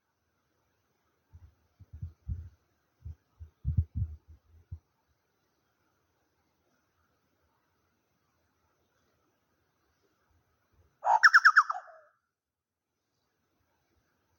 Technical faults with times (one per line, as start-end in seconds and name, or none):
none